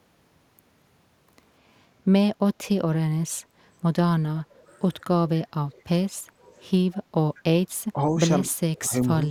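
Speech, with two faint echo leaks at 6.92–6.97 s and 7.36–7.40 s: a distinct repeat about 191 ms behind, far below the speech, unlike reverb's smooth tail, likely from incomplete echo cancellation. Speech is then suppressed in double talk at 7.93–8.01 s, 8.44–8.52 s and 8.8–9.1 s, dipping by up to roughly 10 dB rather than dropping into silent gaps, likely because the canceller ducked its own talker along with the loudspeaker echo.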